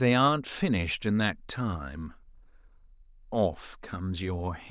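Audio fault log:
Nothing to log here, as this speech recording comes across without any technical trouble worth noting.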